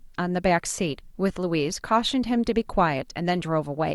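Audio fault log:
No faults are audible anywhere in this speech recording.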